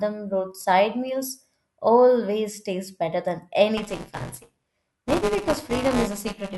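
From 3.77 s, just after "always taste better than", the writer and reader of the ring buffer slip out of step, causing buffer tearing: a small slice of each period replays audio from a lap earlier. The speech takes on a robotic 200 Hz buzz through to the end.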